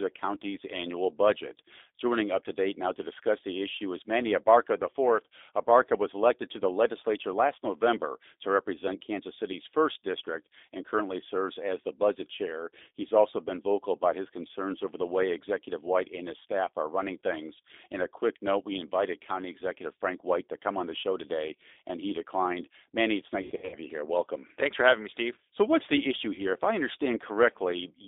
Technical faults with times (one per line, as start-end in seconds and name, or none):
0.00-28.08 G.729 codec
23.42-23.76 VoIP packet loss concealed by the speech codec
26.35-26.41 VoIP packet loss concealed by the speech codec